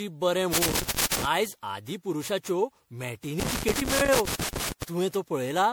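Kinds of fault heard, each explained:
Generation loss: The speech sounds swirly, smeared and hollow throughout, and consonant onsets lose their edge. A single lossy encode at a moderate bitrate would not account for that much damage. The likely cause is the audio having been MP3-encoded and decoded around ten times, with the character fitting a chain near 96 kbit/s. Each pass requantised on a shifted frame grid, stacking up noise and spectral holes. Unlike one low-bitrate encode, the hollowness is layered and cumulative.
Loose connector crackle: Irregular bursts of scratchy crackle cut into the speech from 0.53 to 1.25 s and again from 3.40 to 4.83 s. This is a worn or dirty contact rapidly making and breaking as it moves. The signal is chopped on and off. The bursts are uneven and confined to those two stretches, which separates them from steady codec damage or evenly spaced digital clicks.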